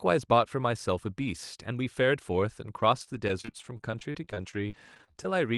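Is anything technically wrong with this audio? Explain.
Yes. From 2.77 to 5.39 s there is repeated packet loss, giving a robotic sound. Many short gaps, up to 33 ms, are patched by repeating prior audio, so the speech sounds choppy, with pieces missing.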